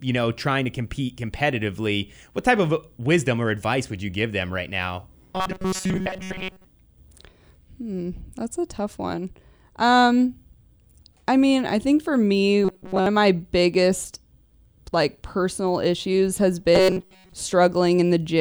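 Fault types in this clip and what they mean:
Robotic sound from repeated short buffers: speech becomes a rigid metallic buzz near 188 Hz, likely from the last few milliseconds being replayed while late audio was skipped; spectrograms show evenly spaced harmonic lines, and the waveform a cycle repeating every 5.3 ms.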